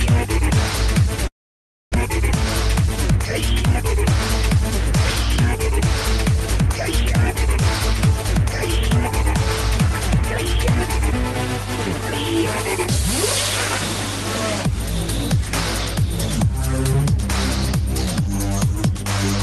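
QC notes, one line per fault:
Throughout: mains hum. A steady 50 Hz tone with low harmonics sits under the whole clip, strong at around 10 dB below the signal. It points to a ground loop or nearby transformer leaking the power line into the audio.
1.27 to 1.98 s: long network dropout. The last sound smears into a fading buzz, then goes silent. About 600 ms of audio is simply gone. It likely comes from packets that never arrived, so the stream resumes slightly later, skipping the lost part.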